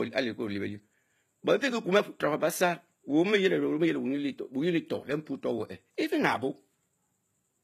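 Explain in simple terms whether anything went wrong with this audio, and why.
Throughout the speech, s sounds come out gritty and lispy with a metallic treble, likely from HE-AAC compression faking the top end by copying lower frequencies upward.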